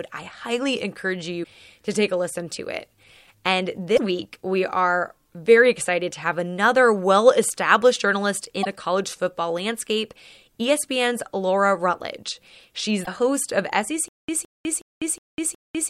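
Damaged data in a compressed stream causes four brief glitches, at 1.40–1.45 s just after "I highly encourage" and before "to take a listen", at 3.96–3.99 s just before "week we are very", at 8.61–8.67 s, and at 13.02–13.08 s just before "host of". Each lasts only 30 to 55 ms. Corrupted bytes make the decoder misread frames and hunt for the next valid header, so the sound briefly breaks up. Nothing repeats, which separates these blips from a stall.

From 14.08 s to the end, a stutter with silent gaps takes over. A 164 ms fragment plays, then about 201 ms of dead digital silence follows, and the cycle repeats every 366 ms, five times in all. The likely cause is a player or stream that stalled and replayed its last buffered piece on each retry before running empty. The audio that belonged there is lost. Its even, repeating rhythm and true silence set it apart from the single, irregular glitches earlier in the clip.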